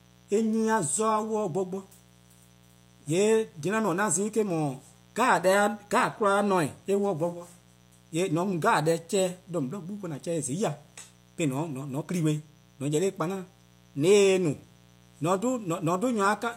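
Mains buzz runs through the whole of this speech recording, a steady, raspy buzz sitting roughly 30 dB below the speech. It is built on a 60 Hz mains supply: sharp switching spikes from something like a dimmer, a rectifier or an unshielded cable get into the signal path twice per cycle, so the interference carries a dense stack of 60 Hz harmonics reaching up into the kHz range.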